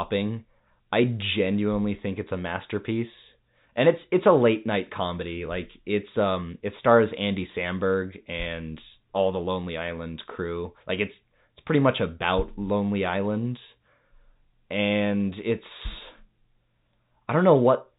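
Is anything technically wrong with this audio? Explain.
No, nothing is wrong: the speech carries the narrowband character of G.711 telephone coding, with nothing above 4 kHz and only the faint level-following hiss that format always has.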